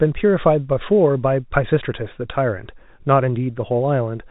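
No technical faults are audible anywhere in this speech.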